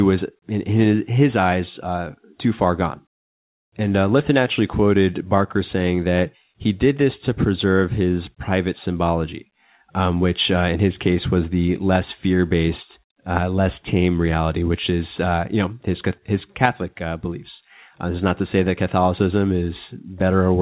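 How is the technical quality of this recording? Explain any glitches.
The technical quality of this recording is good, with no glitches to explain, though the sound travels over a narrowband telephone-grade call link that leaves nothing above 4 kHz.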